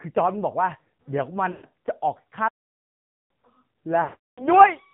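Speech coded through the AMR narrowband mobile codec, with buzzy, synthetic damage consistent with roughly 7.4 kbps; the spectrogram shows nothing above 4 kHz. Lost AMR speech frames at 1.52–1.65 s and 4.04–4.47 s make the sound smear and fade to silence, fitting about six and seventeen missing 20 ms frames; the waveform tapers off and the spectrogram shows blurred, held harmonics. From 2.48 to 3.30 s the sound stops dead for about 0.82 s, a flat-line gap in the waveform and a blank spectrogram column, likely a playback stall.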